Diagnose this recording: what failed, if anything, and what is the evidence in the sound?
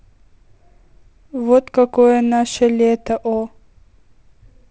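Nothing failed; the wideband telephone coding sounds as expected.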